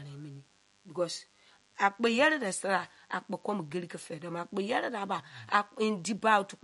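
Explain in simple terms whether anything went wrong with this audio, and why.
A thin, steady buzz sits under the speech from start to finish, well below the speech in level. This is DECT cordless phone buzz: a nearby cordless phone or its base sends a radio pulse 100 times a second, and the recording circuitry turns those pulses into an audible 100 Hz hum with many overtones.

The speech also sounds watery and smeared throughout, with nothing above about 11 kHz, so it lacks crispness. The likely cause is MP3 compression: the encoder ran short of data, discarded quieter parts of the sound that flicker in and out, and cut off the highest frequencies entirely.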